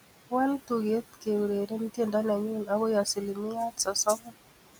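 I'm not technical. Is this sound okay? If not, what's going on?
No. All the way through, the background noise seems to dip in the gaps between phrases and swell back up underneath the talking. These are noise suppressor artifacts: a processing step tries to remove steady background noise by turning down the parts of the sound it judges to be noise, moment by moment. The room's own background noise sits well beneath the voice, and the suppressor is pushing it down strongly.

Between 3.54 and 4.48 seconds, parts of the speech itself go faint, as if bits of words were swallowed, adding up to roughly a third of a second. This is speech cut by the noise suppressor: it mistook some quieter pieces of the talking, such as soft consonants or word endings, for background noise and turned them down along with it.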